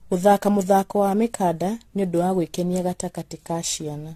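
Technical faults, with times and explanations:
Throughout, generation loss: the speech was likely decoded and re-encoded around seven times through an AAC-LC chain that sounds like roughly 64 kbit/s, each pass requantising on a shifted frame grid, so swirly noise and spectral holes pile up, attacks smear, and nothing remains above 14.1 kHz.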